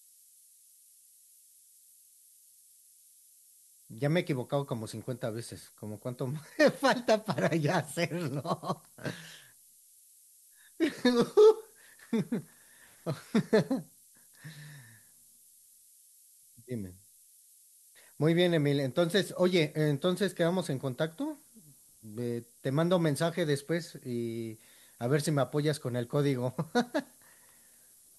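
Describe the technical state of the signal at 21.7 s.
At 21.7 s, as everywhere in the clip, there's low bit depth with noise shaping. The coarse rounding, which fits roughly 8 bits, gets pushed upward into a steady, thin hiss only about 20 dB under the speech.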